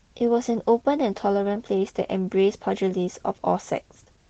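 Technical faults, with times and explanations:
Throughout, Opus voice compression: coarse excitation coding in hybrid SILK-plus-CELT mode, consistent with about 16 kbps, makes the speech plainly hoarse and slightly robotic.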